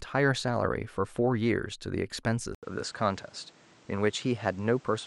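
At 2.55 s the input was likely switched to a poorer device: after a gap of about 80 ms, the speech loses everything above 9.2 kHz, turning duller, and a new background noise appears around 30 dB below it, at much the same level, until the end.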